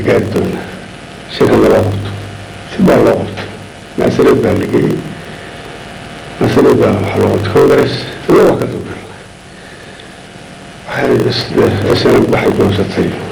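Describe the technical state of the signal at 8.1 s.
At 8.1 s, as throughout the clip, there is a padded block size mismatch. Each block is short of samples and zero-filled, so a gap recurs at about 46.9 Hz, heard as a buzz. The audio runs at 0.938 speed, which fits 1024-sample reads.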